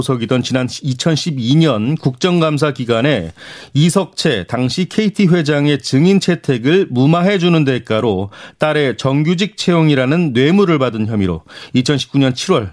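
No technical faults are audible.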